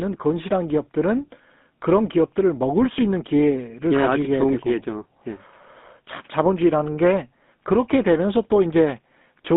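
From start to finish the speech carries the signature of the GSM full-rate codec, and the damage is plainly audible. The codec rebuilds the voice from a vocal-tract model excited by a thinned, regularly spaced pulse train, so voiced sounds take on a buzzy, gravelly roughness. The band is confined to roughly 200 Hz to 3.6 kHz, stripping the air and sibilant detail. The coarseness fits the 13 kbps full-rate mode.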